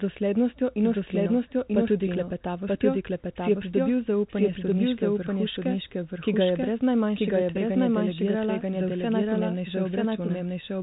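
From start to end the speech carries a doubled audio track. A full-band copy trails the original by about a second at roughly equal level, likely because the signal is picked up again over a slower path or an edit left two copies out of step. It sounds like a dry, distinct repeat with no room tail. On a spectrogram each syllable pattern reappears intact a second later, both copies stopping near 3.8 kHz at the telephone band edge.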